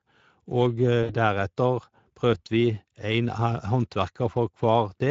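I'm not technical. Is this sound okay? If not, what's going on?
No. Throughout, the voice sounds hoarse and grainy. That's the Speex codec, an older internet-call compression squeezing the speech into too little data.

From 1.03 to 1.15 s the voice briefly turns into a stretched, fading sound. That's VoIP packet loss concealed by the speech codec: about 60 ms of data went missing, and the decoder filled the gap by stretching the last sound it had.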